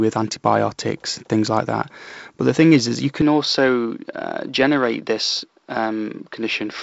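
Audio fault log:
3.22–6.82 s: input likely switched to a poorer device after "thing is is you", top end now stopping near 5.7 kHz, level unchanged, no gap, new noise floor roughly 55 dB below the speech.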